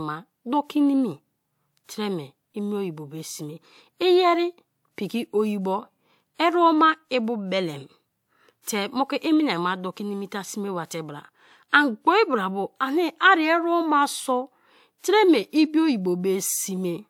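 A speech recording with pre-echo in two spots: a short hiss creeping in about 50 ms ahead of a sharp attack at 8.62 to 8.67 s, and again at 14.98 to 15.04 s. The codec's block-wide quantisation noise leaks into the quiet lead-in, smearing each onset.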